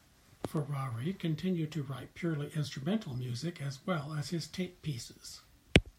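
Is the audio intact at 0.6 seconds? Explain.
No. A bit error spike lands at 0.57 s, just before "continued to write purely". It spans three consecutive samples. A single flipped bit in memory or on a digital link throws each sample's value off by a power of two, then the signal snaps straight back. The jump peaks at about -31 dBFS. It is heard as one brief, sharp tick. Its energy is spread across the spectrum and bears no relation to the speech around it.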